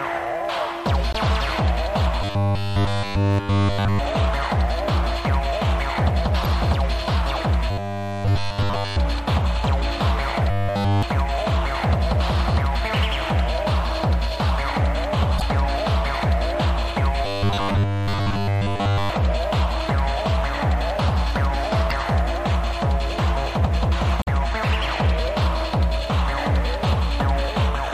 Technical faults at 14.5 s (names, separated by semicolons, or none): none